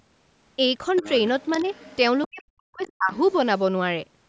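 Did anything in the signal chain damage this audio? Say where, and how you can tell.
Yes. Both faults sit in the call processing stage.

The other side's voice leaking through is audible as a second, fainter voice behind the speech. It runs from 0.96 to 1.97 s, then at 2.22 to 2.43 s, 2.80 to 2.92 s and 3.15 to 3.33 s. It starts about 20 dB below the main speech and fades with each burst to about 35 dB below. The likely cause is an echo canceller that left some of the loudspeaker sound in the microphone signal.

The speech is also suppressed in double talk from 2.29 to 3.13 s. The main speech dips, with about 0.7 s affected in total. At its deepest it drops by roughly 40 dB. This happens while the leaked voice is present, at 2.22 to 2.43 s and 2.80 to 2.92 s. With both sides sounding at once, the canceller likely could not separate the two, so it turned down the wanted speech along with the echo.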